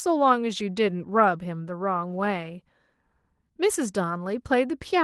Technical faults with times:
none

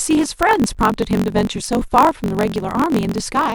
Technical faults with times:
0.00-3.55 block size mismatch (truncated)

